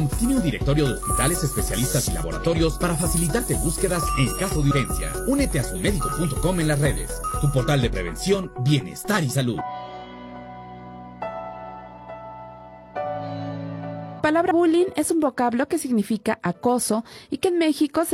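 A recorder or processor that likely works in 5-second chunks drops a short stretch each time it closes one chunk and opens the next, and the two sides are butted together with no gap. This produces abrupt skips at 4.71, 9.61 and 14.51 s. At each one, about a tenth of a second of sound is simply gone and the audio jumps forward. That is the audio missing between chunks fault, recurring at a steady interval.

From 14.15 to 14.20 s there is damaged data in a compressed stream. A short run of the encoded stream is corrupt, so the decoder misreads those frames, loses its place and has to hunt for the next valid frame header before it can resume. For roughly 50 ms the sound turns into a brief, garbled blip, just before the chunk skip at 14.51 s.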